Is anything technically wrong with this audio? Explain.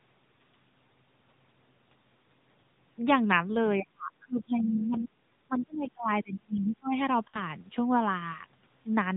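Yes, there are four faults in this speech clip.

The AMR narrowband mobile codec runs throughout. The whole clip was squeezed through the 2G/3G speech model, and the plainly audible buzzy, synthetic edge fits the 10.2 kbps mode. On a spectrogram, everything stops sharply at 4 kHz, leaving an empty band above.

From 3.75 to 6.97 s the speech is suppressed in double talk. For roughly three seconds the level sinks and breaks up, dipping as far as about 30 dB. The likely cause is an echo canceller treating overlapping talk as echo and attenuating it. The waveform shows a clearly shrunken, notched envelope.

At 4.92 to 4.96 s, the other side's voice leaks through as a 40 ms scrap, roughly 25 dB below the main speech. This is likely residual loudspeaker echo that the canceller did not remove. It appears as a faint, thin sliver of energy in the spectrogram.

From 7.28 to 7.42 s, lost AMR speech frames leave a 60 ms gap, which fits three dropped 20 ms frames. 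The decoder repeats stale parameters with falling gain, so the sound smears and fades, then returns rough. The waveform shows a short, tapering trough.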